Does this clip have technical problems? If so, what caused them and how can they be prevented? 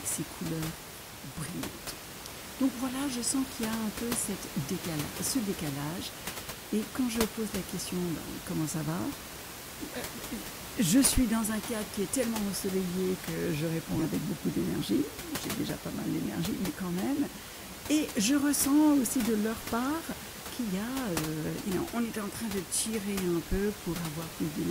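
Yes. Corrupt frames were decoded: bits inside compressed frames were flipped in transit or storage, and the decoder played the damaged frames instead of rejecting them, so misread gains and codes put energy at the wrong frequencies. The speech gets brief chirp-like bursts at 3.45–3.52 s, 13.94–14.06 s and 22.13–22.18 s. The middle burst is the loudest, peaking around -15 dBFS, and its length suggests several consecutive frames were hit. The other two are quieter and shorter, each covering a few frames. The room noise, sitting about 10 dB below the speech, comes from the recording environment, not from the system. To prevent the bursts, add checksums or error-correcting codes so damaged frames are detected, then have the decoder conceal or discard them rather than play them.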